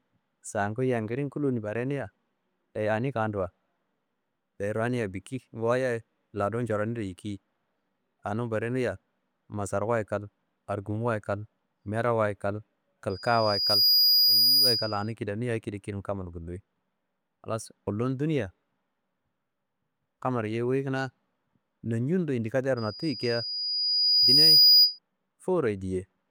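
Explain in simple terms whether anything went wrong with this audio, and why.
Loudspeaker feedback squeal happens twice: from 13.09 to 15.12 s and from 22.77 to 24.99 s. The microphone picks up its own loudspeaker. A high 4.9 kHz whistle builds on itself. It swells in under a second first, then over about two seconds.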